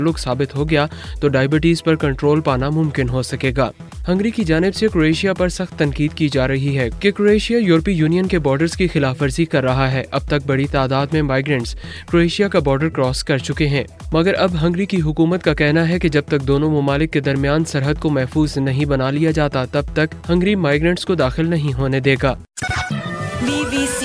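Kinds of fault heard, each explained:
No technical faults are audible anywhere in this recording.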